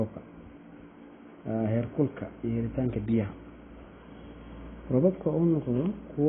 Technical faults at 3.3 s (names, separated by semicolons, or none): AAC compression